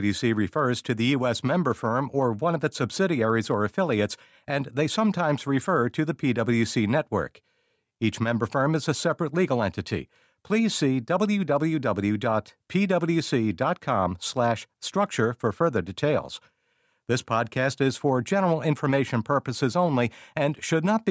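No technical faults can be heard anywhere in the recording, and the signal stays stable and intact throughout.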